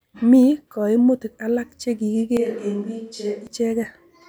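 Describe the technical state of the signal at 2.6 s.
At 2.6 s you're inside a switch to a distant microphone, running from 2.37 to 3.47 s, right after "kaimutik alak che". The speech suddenly goes roomy and thin, about 5 dB quieter, with more room noise. It's likely the close mic dropped out and a farther one took over.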